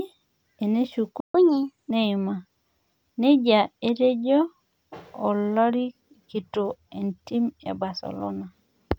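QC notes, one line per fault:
1.20–1.35 s, playback stall: the speech cuts out abruptly mid-flow and the output drops to silence for about 140 ms before resuming. The gap is long enough to register as a hitch rather than a click, and nothing is smeared across it. The cause is likely the player running dry of buffered data or its audio thread being blocked briefly, so no samples reached the output until it recovered.
1.35–1.91 s, catch-up at higher speed: as soon as the audio returns, the speech runs fast at 1.25 times normal speed for just over half a second, with pitch raised by roughly four semitones, so it sounds briefly chipmunk-like and hurried. The player is resampling its backlog to recover the time lost in the stall, which shifts pitch along with tempo. Speed and pitch then drop back to normal at 1.91 s.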